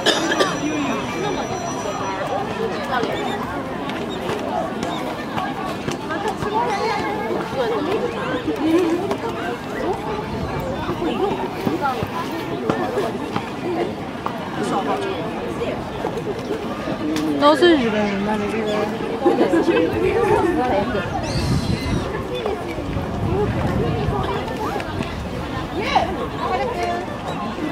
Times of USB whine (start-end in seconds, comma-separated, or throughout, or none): 23.17-26.55